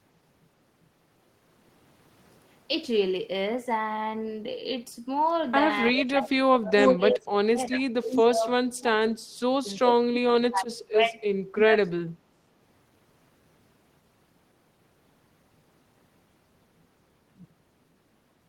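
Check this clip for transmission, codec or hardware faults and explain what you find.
Two faults affect the speech between roughly 6 and 12.5 s, both typical of a hands-free call where the two ends talk over each other.

Speech suppressed in double talk occurs at 5.92–9.62, 9.79–11.21 and 11.64–12.45 s. The echo canceller, likely confused by simultaneous talk from both ends, turned the near talker down along with the echo. Speech dips by up to about 30–35 dB and breaks up in pieces totalling a few seconds.

Echo leak occurs at 6.78–6.96 and 8.11–8.22 s. The far end's echo canceller likely failed to remove all of the loudspeaker sound from its microphone pickup, so it sent part of it back. Short scraps of the voice return 355 ms late, first slightly louder than the speech, then slightly quieter.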